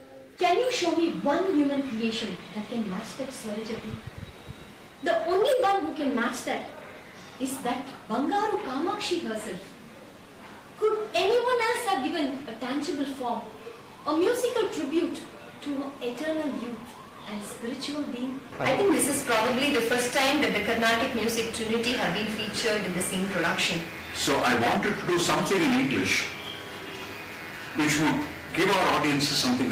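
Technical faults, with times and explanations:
No technical faults detected in the recording.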